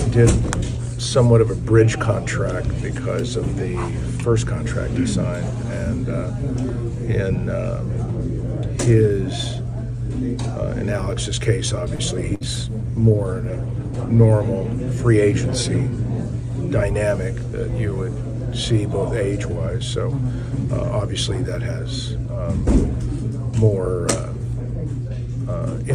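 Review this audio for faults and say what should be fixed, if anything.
At 11.95 to 12.02 s there is a short stall from a late packet. One packet arrived behind schedule, so the jitter buffer emptied. The receiver held the last sound for about 33 ms, then carried on from the same point. Nothing is lost, but the sound hangs briefly with a faint buzz. Playback runs about 33 ms later afterwards. A slightly deeper or adaptive jitter buffer would absorb this kind of delay.

At 12.35 to 12.43 s there is a burst of packet loss. Packets went missing in a row. The receiver filled about 56 ms by extending the last sound and fading it down, heard as a held buzz or hiss. About 60 ms of audio is skipped, and the sound resumes further along. Forward error correction or redundant packets would let the receiver rebuild the gap.

From 12.38 to 14.38 s there is a call bitrate drop. The bandwidth estimate fell, and the encoder went from 128 kbps to 23 kbps. 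It stayed at the lowest rate for about 1.9 s. The coarser coding makes the sound rougher and duller, with less top end. Full quality returns near 14.4 s. Smoother bandwidth estimation and a higher minimum bitrate would keep this step from being so abrupt.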